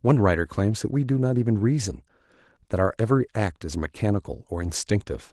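Speech clip with no technical faults to report; the Opus voice compression is audible only lightly and keeps full bandwidth, which fits a hybrid-mode stream at around 20 kbps.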